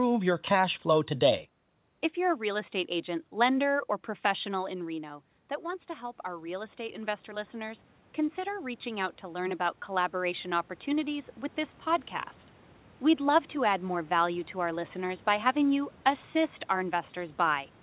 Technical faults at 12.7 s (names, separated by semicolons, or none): none